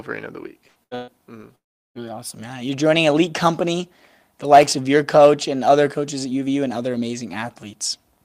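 Three bursts of packet loss break up the opening second of this speech recording, at 0.67–0.78 s, 0.83–0.94 s and 0.95–1.11 s. In each, packets stopped arriving in time and the receiver padded the gap by extending the last sound and fading it, for about 80 ms, 77 ms and 123 ms respectively. This produces a short held buzz or hiss in place of the real signal. When playback resumes, roughly 80 ms, 80 ms and 120 ms of the speech has been skipped, so the three losses together make the start sound stuttered and chopped. From 1.55 s to 1.98 s the audio cuts out for longer. A brief fading continuation gives way to about 370 ms of near-silence, and the speech then returns with around 400 ms missing, most likely a long network dropout in which nothing reached the receiver for that stretch and concealment ran out. At 4.62–4.71 s there is an irregular burst of crackle and scratching, the signature of loose connector crackle. 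A worn or dirty contact in the signal path rapidly made and broke the connection, chopping the audio for that tenth of a second, with any DC present on the line adding pops at each break.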